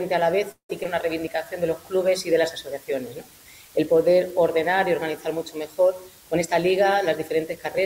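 The audio was reduced to a very coarse resolution, consistent with about 7 bits, with dither added before rounding, so the rounding error becomes a constant, even hiss only about 25 dB below the signal, with no distortion. From 0.51 to 0.70 s the receiver's jitter buffer ran dry, likely because packets were held up in transit, producing a call audio freeze. The last sound is stretched and fades, with about 179 ms filled in all, including roughly 100 ms of silence, before the audio resumes where it stopped, leaving nothing missing but about 0.18 s of extra delay. At 0.83 to 0.86 s, about 50 ms of audio never reached the decoder. This short concealed packet loss was patched with only about 12 ms of continued sound that blends back in, so it is heard as a brief smear where a little of the sound drops out, and the call ends up roughly 40 ms less delayed. From 1.20 to 1.46 s a jitter buffer slow-down builds a reserve by repeating single pitch periods or slices of pause, adding about 38 ms. 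That stretch plays at 88% speed without any change in pitch, so sounds are drawn out. From 6.35 to 7.78 s the opposite happens: a jitter buffer speed-up trims an excess backlog by cutting short pieces, removing about 0.15 s, so the audio runs at 109% speed at unchanged pitch and sounds hurried.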